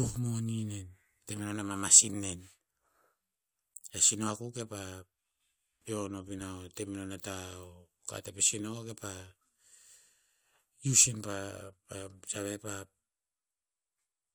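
No dropouts, clicks, distortion or other technical faults can be heard anywhere in the speech.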